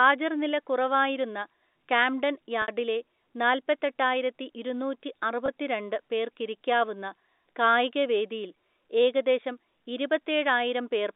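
Packet loss with pitch repetition strikes twice: a 60 ms loss at 2.62–2.68 s, right after "കുറവായിരുന്ന കാംഡൻ", and a 20 ms loss at 5.46–5.48 s. The receiver looped the last pitch period across each gap, so the 20 ms loss sounds like a brief buzzy hold, while the 60 ms loss fades into silence before the speech returns with a short cross-fade.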